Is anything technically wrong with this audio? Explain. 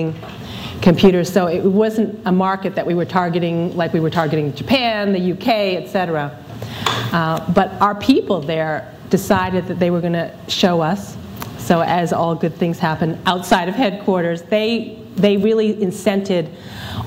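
No technical faults are audible.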